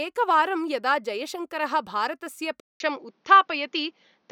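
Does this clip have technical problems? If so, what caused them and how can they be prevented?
Yes. At 2.60 s the sound drops out for about 200 ms. When it returns, it is duller and boxier, and this lasts to the end. Nothing is left above about 6.7 kHz. A faint new background noise appears, roughly 50 dB below the speech. The loudness barely changes. This points to the input switched to a poorer device, likely a second microphone or a headset call profile with a narrower band. Locking the input device before recording prevents it.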